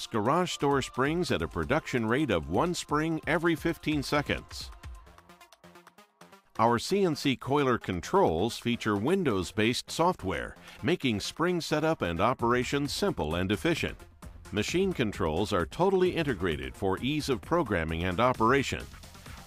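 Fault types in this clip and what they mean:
There are no fault types to list for this clip.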